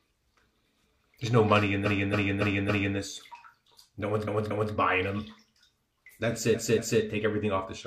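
Repeated frames occur three times. From 1.81 to 2.93 s, a 0.28 s block plays five times in a row. From 4.23 to 4.69 s and again from 6.51 to 6.97 s, a 0.23 s block plays three times. Each time, a run of compressed frames was delivered more than once, so the decoder replays the same stretch, heard as a stutter. On a waveform or spectrogram, identical shapes sit side by side at those spacings, and each run lengthens the clip by its repeated time.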